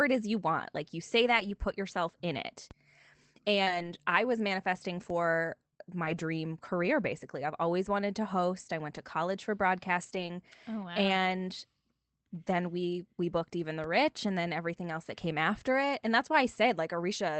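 From 1.27 to 1.45 s the sound turns rougher and noisier for a moment but never drops out. This is a lost packet rebuilt from error correction: a run of packets went missing, and the decoder played the low-bitrate copies carried in the packets that followed. About 100 ms was rebuilt this way, which fits five 20 ms packets. The same roughened patches return at 3.67 to 3.89 s (about 120 ms), 6.05 to 6.19 s (about 80 ms) and 10.03 to 10.29 s (about 140 ms).

At 2.71 s, just after "put yourself in it", a single low thump sounds while the speech carries on undisturbed. This is a DC step: the waveform's zero line jumps to a new offset, and the sudden shift is what is heard. The offset then fades away as a 20 Hz high-pass drains it. A second DC step lands at 5.10 s, right after "I was manifesting", with the same dull knock.

Between 3.63 and 3.69 s, just before "I was manifesting", a brief smear blurs the sound. 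This is short concealed packet loss. About 40 ms of audio never arrived in time, and the receiver covered roughly 31 ms of it by extending the preceding sound before blending back into the real signal. The roughness of the overlapping error-correction repair follows straight on. Throughout, the call codec keeps content below about 8 kHz.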